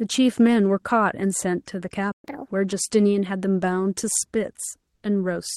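At 2.12 s the speech breaks off and the output goes silent for 120 ms, until 2.24 s. This is a playback stall: the player had nothing to send to the output for that stretch, likely because its buffer ran dry or its playback thread was held up. It is heard as an abrupt hole in the middle of the flow, long enough to be noticed as a dropout rather than a click.

From 2.24 s to 2.48 s the player makes up for the stall with catch-up at higher speed. It resamples the queued audio at 1.5 times normal rate, so the 240 ms of output covers the backlog and the time lost. Because resampling moves speed and pitch together, the speech comes out hurried and raised by roughly seven semitones before it drops back to normal pitch and tempo.

Between 4.95 s and 5.03 s, a pause of 80 ms, the real background is replaced by comfort noise. The sending side stopped transmitting during the gap in speech, and the receiver filled it with synthetic noise shaped like the background, which points to Opus DTX. 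The background sits about 57 dB below the loudest speech, and the substitute is about 1 dB quieter and smoother, without the texture of the real background. The band limit near 12 kHz from the call codec carries through this section.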